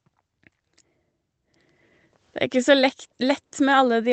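No technical faults are audible.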